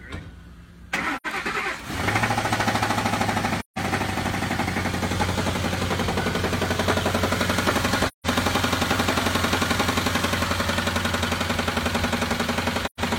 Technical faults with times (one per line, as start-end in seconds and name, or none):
1.16-1.26 AAC frame loss with muting
3.59-3.78 AAC frame loss with muting
8.07-8.27 AAC frame loss with muting
12.85-13.00 AAC frame loss with muting